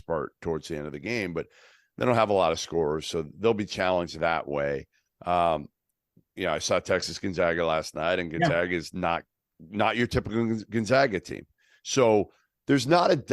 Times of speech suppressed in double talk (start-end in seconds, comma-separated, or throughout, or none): none